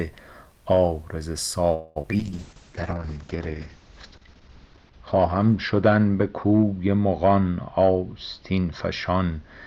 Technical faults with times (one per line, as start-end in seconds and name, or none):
1.73-1.98 call audio freeze
2.02-2.21 short concealed packet loss
2.18-9.67 call bitrate drop
2.53-3.38 jitter buffer slow-down
7.77-8.66 jitter buffer speed-up
9.10-9.44 jitter buffer speed-up